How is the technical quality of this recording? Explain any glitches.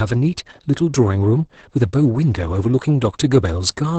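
Quality's pretty rough, with heavy Opus voice compression from start to finish. The SILK coder starves the excitation at a rate that points to roughly 10 kbps and cuts everything above 8.8 kHz, so the speech sounds muffled, hoarse and a bit robotic.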